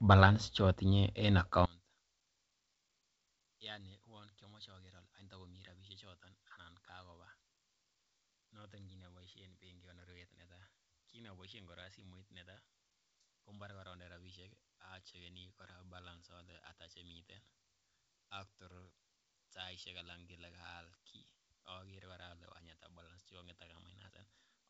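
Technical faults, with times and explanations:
1.66 s to end, one channel inverted: speech sinks about 28 dB to a faint residue, likely polarity cancellation in mono, not a dropout, since traces remain.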